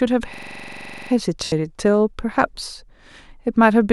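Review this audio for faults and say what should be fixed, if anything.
A system hang loop runs from 0.34 to 1.11 s. The driver froze while the hardware replayed one 42.67 ms block, which fits a 2048-sample buffer, 18 times at 23.4 Hz, giving a rattling buzz. The waveform shows identical repeated blocks, and the spectrogram shows a frozen spectrum with vertical seams. Prevent it with a driver watchdog that mutes the output when buffer updates stop.

Lost LE Audio frames occur from 1.44 to 1.52 s. About 80 ms of Bluetooth LE Audio went missing, which points to roughly eight frames. The LC3 decoder reused the last spectrum with randomised signs, so speech harmonics smear into noise and fade out. The spectrogram shows blurred horizontal bands, and the waveform shows a decaying noisy envelope. Prevent it by improving link quality or adding retransmission headroom.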